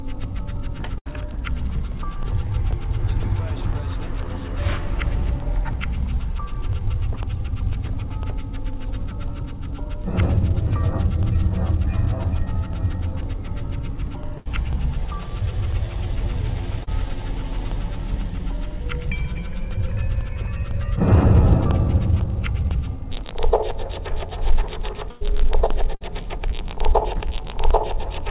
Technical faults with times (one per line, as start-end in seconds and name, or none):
0.24-28.20 periodic USB or driver dropouts
0.98-1.08 burst of packet loss
14.38-14.47 burst of packet loss
16.83-16.89 short concealed packet loss
25.11-25.23 burst of packet loss
25.95-26.03 burst of packet loss